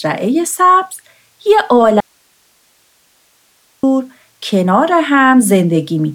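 From 2.00 to 3.83 s, the wanted signal was likely lost while the path after the break stayed live, causing an audio dropout to a faint residue. The speech cuts out abruptly for 1.83 s, leaving only hiss about 40 dB down, then snaps back.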